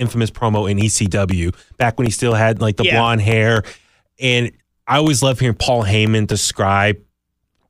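Periodic USB or driver dropouts: something stalls the USB bus or audio driver every 0.25 s from 0.06 to 7.57 s, blanking about a millisecond of speech with silence each time. Some thirty regular ticks result, audible wherever speech is present.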